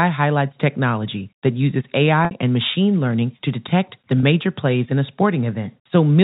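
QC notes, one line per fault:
2.25–2.31 s and 4.20–4.23 s, packet loss with pitch repetition: 60 ms gone after "technology that uses", then 30 ms after "learning to detect the". The receiver loops the last pitch cycle to cover each hole, so you hear a brief held, buzzy smear, and the longer one fades into silence before speech returns.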